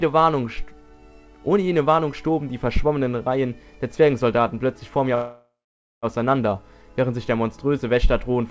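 At 5.15 s the audio stalls until 6.06 s in a call audio freeze, likely from packets held up in transit so the jitter buffer ran dry. The last sound carries on as a fading buzz or hiss that settles into about 0.52 s of silence before playback resumes exactly where it left off. Unlike a packet-loss dropout, nothing is skipped. About 0.88 s is inserted and everything after runs that much later. Throughout, the band stops at 8 kHz, consistent with G.722.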